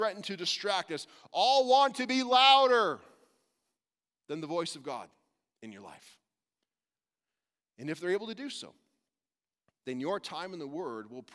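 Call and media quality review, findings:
Nothing to flag on this speech recording; no faults turned up anywhere in the audio.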